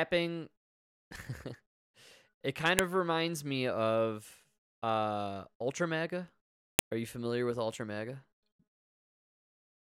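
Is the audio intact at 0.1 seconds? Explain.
Yes, at 0.1 seconds the audio is intact, with no dropout, click, distortion or other fault to be heard at that moment.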